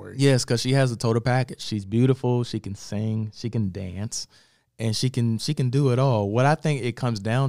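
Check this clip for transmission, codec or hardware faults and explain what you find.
One fault is present, from 1.63 to 3.63 s, between "has a total package" and "dance and she can". It is de-emphasis applied wrongly: a treble cut meant for pre-emphasised audio slopes the response down to about -8 dB at 10 kHz. The speech turns dull and muffled, with a gradual tilt rather than a lowpass's abrupt cutoff.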